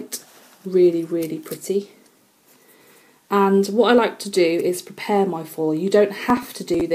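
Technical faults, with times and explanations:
6.30–6.81 s, processor overload crackle: the processor falls behind and about 15 very short buffers, around 1.5 ms each, are skipped outright, leaving gaps with hard edges that sound as gritty tearing. The waveform shows abrupt notches and discontinuities, and the spectrogram shows vertical broadband streaks.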